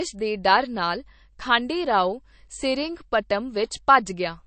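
The speech was most likely squeezed through a low-bitrate MP3 encoder, one starved enough to fit a rate in the region of 36 kbps, and the MP3 compression damage is plainly audible from start to finish. With too few bits, the encoder has discarded everything above about 8.3 kHz, leaving the sibilants dull, and has dropped weak frequency lines that flicker in and out between frames, giving the audio a watery, swirling texture and softened onsets.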